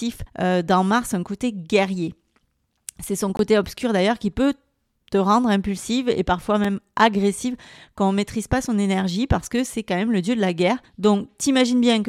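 A speech recording with two blocks of digital silence. The first runs from 3.37 to 3.39 s, a 21 ms hole just before "obscur d'ailleurs qui peut", a length that fits a 1024-sample buffer left unfilled. The second, at 6.64 s between "rendre impulsive et parfois" and "agressive quand on maîtrise", lasts only 2.6 ms and is heard as a tick. Both edges cut abruptly, so the waveform shows flat near-silent stretches and the spectrogram shows thin vertical broadband stripes at each transition.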